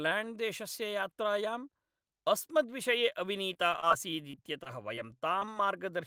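Repeated packet loss (robotic sound) from 3.53 to 3.95 s and again from 4.31 to 5.49 s: gaps up to about 24 ms, filled by extending prior sound, leave choppy speech.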